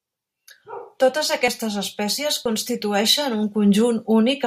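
At 0.50, 1.48, 2.46 and 3.43 s, audio is missing between chunks: brief skips of about 20 ms, likely from losing audio at each 1 s chunk boundary.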